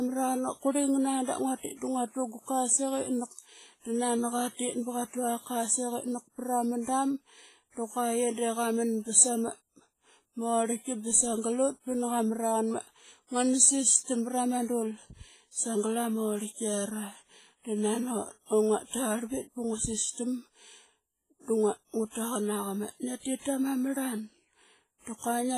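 Across the whole speech clip there is a ringing, washy smear around each syllable and a hiss that swells and fades with the voice, while nothing reaches above 15.4 kHz. This is most likely WMA compression, and heavy-handed at that: a transform codec with long blocks spreads its quantisation noise over tens of milliseconds and throws away weaker spectral detail, which fits a low bitrate in the region of 24 kbps.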